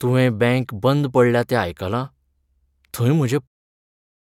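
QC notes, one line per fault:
No fault found in this speech clip.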